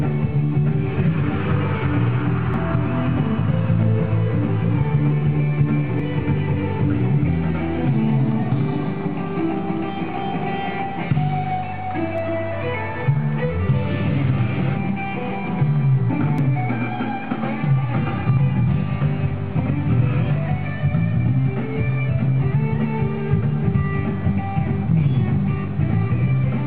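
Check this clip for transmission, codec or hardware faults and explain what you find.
Four dropped buffers (overrun) occur, at 2.54, 6.00, 12.18 and 16.38 s. The likely cause is the capture software falling behind, so the hardware overwrote unread samples. Each gap of about 40 ms (first two) or about 20 ms (last two) is spliced shut, heard as the sound jumping ahead.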